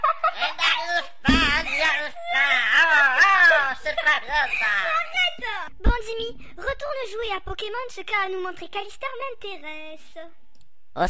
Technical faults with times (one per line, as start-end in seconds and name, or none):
none